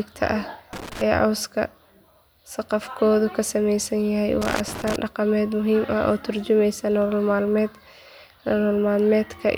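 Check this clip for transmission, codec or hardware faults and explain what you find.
Loose connector crackle appears twice in this speech, at 0.73 to 1.01 s and at 4.42 to 4.96 s, between "saqafkoodu ka samaysan yahay" and "dhaqameed muhiim". A worn contact makes and breaks, chopping the signal into irregular scratchy bursts.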